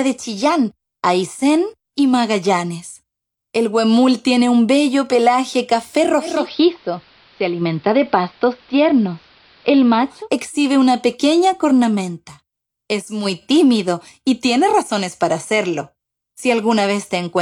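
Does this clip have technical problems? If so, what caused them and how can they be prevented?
Yes. Digital radio blending to analogue from 6.18 to 10.3 s: the receiver lost the digital stream and cross-faded over about 0.3 s to AM, which has a narrower bandwidth, shifts the level by about 1 dB and leaves hiss roughly 35 dB below the signal. Better antenna placement or a stronger digital signal keeps the receiver from falling back to analogue.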